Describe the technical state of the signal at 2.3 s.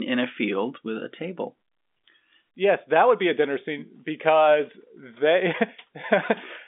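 At 2.3 s the audio is intact, with only the expected G.711 telephone coding at work, so the band stops near 3.7 kHz and any coding noise is faint.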